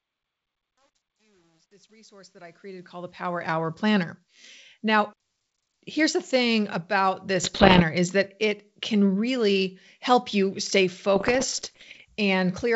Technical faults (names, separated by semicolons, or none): truncation distortion on a fade; bit errors on an ADPCM link